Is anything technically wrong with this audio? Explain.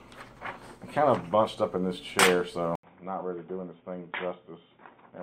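Yes. At 2.75 s the input likely switched to a poorer device: after an 80 ms gap, nothing above 3.7 kHz remains, so sound turns dull, quieter and noisier.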